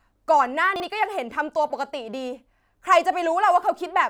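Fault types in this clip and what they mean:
Chunks out of order: between 0.76 and 0.84 s, two adjacent 40 ms chunks of the speech play in swapped order, one arriving a single chunk late and landing after the chunk that should follow it. No audio is missing, but the 80 ms span sounds briefly scrambled, and the reordering creates three hard joins where waveform segments that never belonged together abut.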